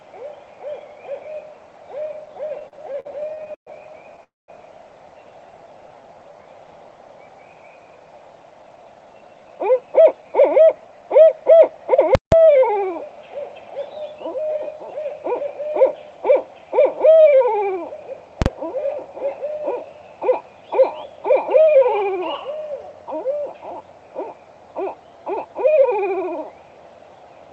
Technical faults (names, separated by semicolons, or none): repeated stalls (stutter); call audio freeze; jitter buffer slow-down; jitter buffer speed-up; invalid numbers at full scale